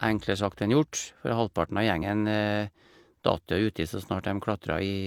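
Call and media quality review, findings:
Damaged data in a compressed stream, 1.98–2.02 s: brief glitch in the speech. Decoder misread corrupt frames, lost sync, resumed at the next header.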